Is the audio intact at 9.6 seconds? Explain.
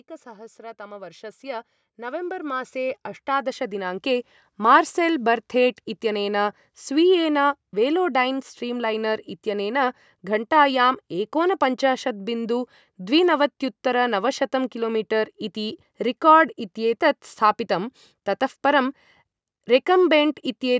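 No. At 9.6 seconds the audio is in the middle of an automatic gain rising fault that runs from 0.59 to 15.84 s. The automatic gain control judged the input too quiet and kept raising its gain step by step, by about 16 dB across that span. As a result, the speech and the background noise swell together, growing steadily louder, rather than holding a constant level. The low cut from the call's microphone processing is normal.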